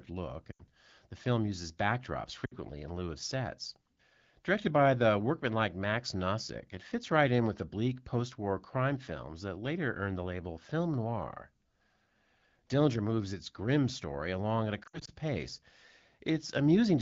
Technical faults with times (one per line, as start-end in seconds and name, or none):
0.51-0.61 lost AMR speech frames
2.45-2.57 lost AMR speech frames
14.83-15.11 lost AMR speech frames